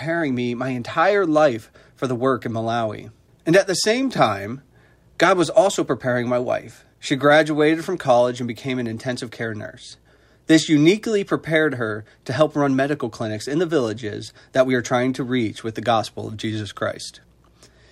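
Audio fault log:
No audible faults were found anywhere in this audio.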